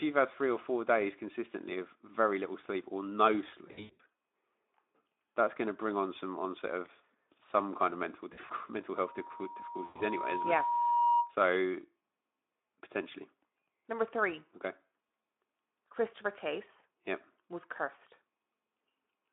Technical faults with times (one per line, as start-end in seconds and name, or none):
3.67-4.01 VoIP packet loss concealed by the speech codec
8.33-8.52 VoIP packet loss concealed by the speech codec
8.96-11.35 loudspeaker feedback squeal
9.85-10.03 VoIP packet loss concealed by the speech codec